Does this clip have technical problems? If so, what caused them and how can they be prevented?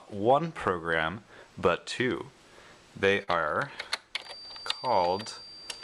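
Yes. From 3.23 to 3.29 s there is short concealed packet loss: about 40 ms arrived too late, and the decoder filled the gap by extending the preceding sound, leaving a brief smear. A larger jitter buffer or a more stable network path prevents it.

From 4.14 s to the end, a thin, steady 4.7 kHz feedback whistle sits well below the main sound, swelling and fading slowly. It is likely caused by a loudspeaker-to-microphone loop running just short of runaway. Lowering playback gain, separating speaker and microphone, or using headphones or echo cancellation prevents it.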